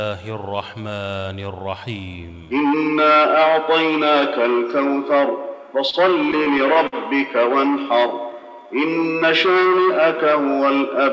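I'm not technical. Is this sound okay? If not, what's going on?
No. There are three problems, all from the sound arriving unevenly over a call connection.

At 5.90 s there is a short stall from a late packet. One piece of sound arrived late. The receiver held the last sound for about 29 ms while it waited. Nothing is lost, but that moment hangs briefly.

From 6.32 to 6.95 s there are repeated stalls, a stutter. Pieces kept arriving late, so the sound paused five times. The receiver stretched what it had, 95 ms in total, the longest wait 54 ms. Nothing is missing, but it drags.

From 7.99 to 8.68 s there is a jitter buffer slow-down. The receiver needed spare sound in reserve. It repeated tiny bits to gain 62 ms. That stretch plays at 92% speed with the pitch unchanged, so it sounds drawn out.

The call line itself carries nothing above 8 kHz.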